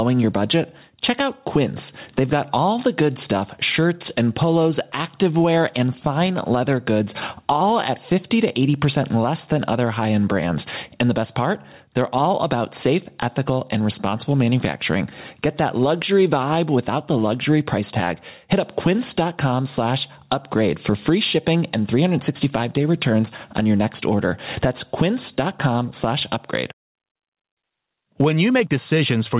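Gain pumping runs the whole way through. The level keeps breathing: it ducks hard the moment the speech gets loud, with a swing of roughly 15 dB. The likely cause is input gain set far too hot, with a fast limiter or compressor clamping down on every peak, so loud and quiet passages end up squashed together. It all sits in a narrowband phone-style sound that tops out around 4 kHz.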